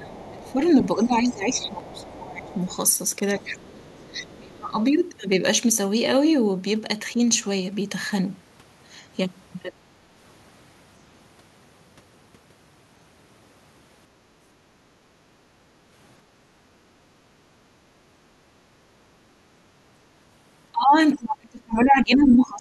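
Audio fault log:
0.0–2.59 s, 3.37–4.81 s, 9.70–9.97 s, 20.72–22.61 s, speech suppressed in double talk: the talker's speech dips and thins out in patches, by about 15 dB in the first stretch and about 25 dB in the later ones. It's likely an echo canceller ducking everything while both ends talk at once.
0.27–2.76 s, 3.50–4.37 s, 21.79–21.84 s, other side's voice leaking through: a faint second voice sits underneath, about 25 dB below the talker in the first and last spots and about 30 dB below in the middle one. It's likely far-end loudspeaker sound the canceller didn't fully scrub from the mic.
0.39 s, 1.80 s, 7.33 s, dropped samples: three single sharp clicks, each from a gap of about 0.7 ms, far too short to lose any sound. The likely cause is a tiny chunk of samples going missing, so the waveform jumps straight to a later value.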